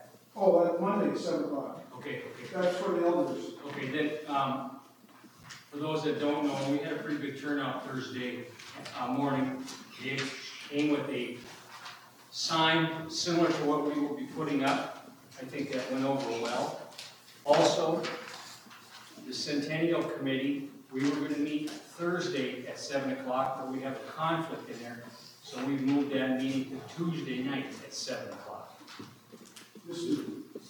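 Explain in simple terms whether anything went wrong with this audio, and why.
Something did go wrong. There is a gap between chunks five times, at 5.43, 11.44, 17.45, 23.45 and 29.46 seconds. The audio was handled in 6-second pieces, and a tiny silence of about 7 milliseconds sits at each join, heard as a brief hole. Unlike a dropout, where sound goes missing, nothing is lost here. The audio simply pauses and resumes, and the holes come at perfectly regular spacing.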